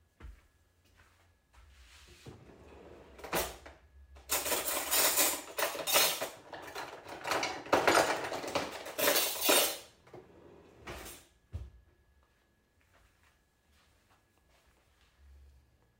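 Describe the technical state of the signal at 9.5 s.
At 9.5 s the sound is intact, with no dropout, distortion, clipping or other audible fault at that moment.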